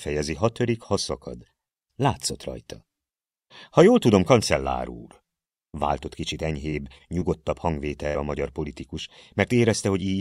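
Short concealed packet loss occurs three times, at 6.69, 6.98 and 7.20 s. Each time about 20 ms of the stream failed to arrive, and the receiver papered over the hole by extending the preceding sound before blending back, leaving a brief smear or wobble. At 8.07 to 8.16 s, a burst of packet loss removed about 80 ms in a row. The decoder filled roughly 70 ms by stretching the last sound and letting it fade, so a held buzz or dying hiss appears, and the audio then jumps ahead with that stretch gone.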